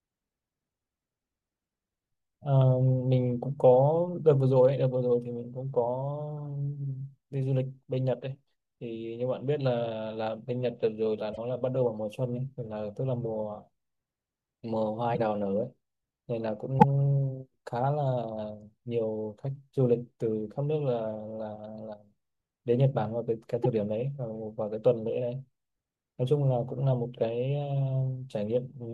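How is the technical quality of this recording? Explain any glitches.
The speech has four brief glitches. At 11.33 to 11.38 s, 15.14 to 15.19 s, 16.79 to 16.84 s and 23.63 to 23.66 s, the speech jumps forward and the gap fills with a short chirp, burst of noise or hole, each about 30 to 60 ms, roughly one or two 26 ms frames. The likely cause is a broken MP3 bit reservoir: frames were dropped, so the frames after each cut reached back for shared data and decoded someone else's bytes.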